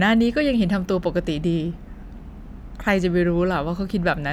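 No technical faults can be heard anywhere in this recording. The speech runs without any dropout, click, distortion or other defect interrupting it.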